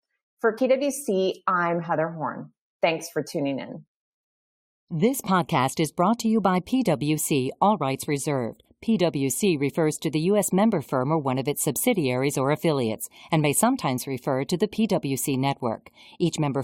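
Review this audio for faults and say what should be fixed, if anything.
At 0.57 s there is a brief disturbance in the speech, the sign of damaged data in a compressed stream. A stretch of the coded bitstream was corrupted, so the decoder misread those frames, lost sync and resumed at the next valid frame header. A simple dropout or clock-slip click is a plain tick or gap. To prevent it, deliver the file or stream over a checksummed, error-protected path and verify its integrity before decoding.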